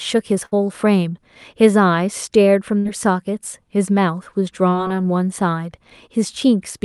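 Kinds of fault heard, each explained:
Burst of packet loss: Twice, near 0.45 to 0.53 s and 2.79 to 2.87 s, about 60 ms of audio went missing and the receiver extended the previous sound while fading it. A spectrogram shows a frozen, dimming band before the sound jumps ahead.
Short concealed packet loss: Around 4.69 to 4.73 s, roughly 20 ms failed to arrive and was patched with a brief synthesized continuation. It is heard as a quick smear; the waveform shows the continuation blending back into the real audio where it resumes.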